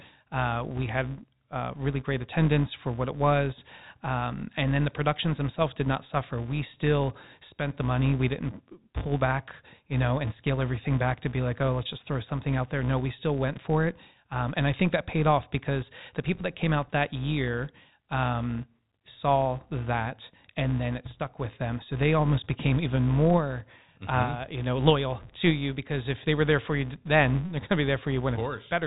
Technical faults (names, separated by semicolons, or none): filter restarted on every block